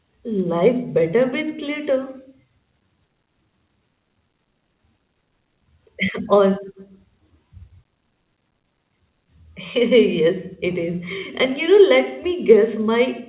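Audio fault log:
Nothing stood out on listening to this speech, which arrives through a telephone-grade call path that carries nothing above 4 kHz.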